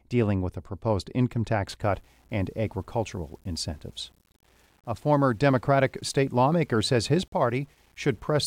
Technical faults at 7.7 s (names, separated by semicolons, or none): low bit depth without dither